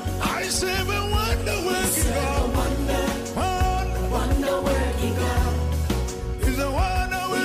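From 2.82 s to 6.01 s a GSM phone buzz sits under the audio. It is a hard, raspy tone at about 217 Hz, thick with harmonics. It stays steady throughout, which fits a phone on a call. A nearby 2G handset transmits in short radio bursts 217 times a second. The audio circuitry rectifies those pulses into sound. The buzz runs at about 25 dB below the signal and has no connection to it.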